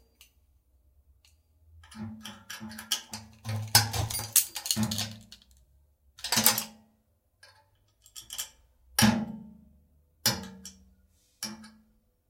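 At 4.00 to 4.03 s a corrupt frame was decoded: flipped bits in what sounds like a single compressed frame put energy at the wrong frequencies, heard as a brief chirp, squeak, blip or burst of noise peaking around -20 dBFS and seen as a short vertical smear on the spectrogram.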